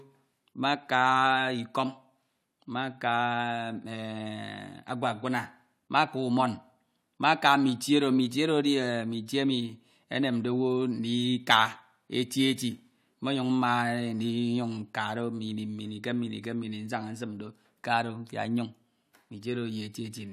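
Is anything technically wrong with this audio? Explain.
No, no faults are audible.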